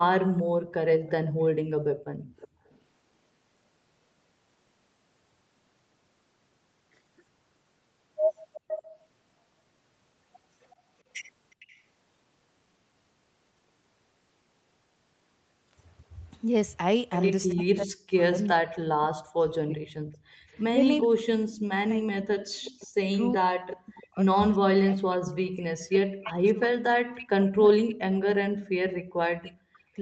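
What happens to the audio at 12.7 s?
Nothing goes wrong at 12.7 s: the speech continues intact through that moment, carrying only the ordinary band limit around 8 kHz and usual coding texture of the Opus call path it travelled through.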